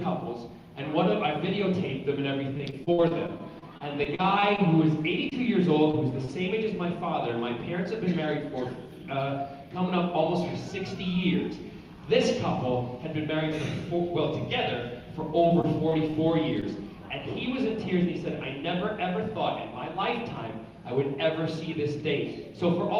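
From 2.57 to 4.68 s the sound turns choppy and robotic, with pieces missing, a case of repeated packet loss (robotic sound). Packets kept arriving lost or late, and each hole, the longest about 55 ms, was patched by extending the preceding audio. About 16% of the stretch is filled-in sound rather than the real signal.

Brief smears or wobbles follow at 5.29, 5.91 and 6.25 s, each a short concealed packet loss. Roughly 20 ms of audio never reached the decoder in time, so the receiver continued the last sound and blended back into the real signal.

From 15.47 to 16.64 s the same robotic choppiness returns, milder, as repeated packet loss with shorter holes of at most about 21 ms. About 9% of this stretch is concealment.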